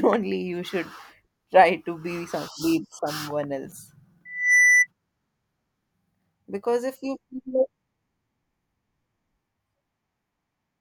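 From 4.25 to 4.87 s, loudspeaker feedback squeal: a 2 kHz tone swells over a fraction of a second. It ends about 10 dB above the speech.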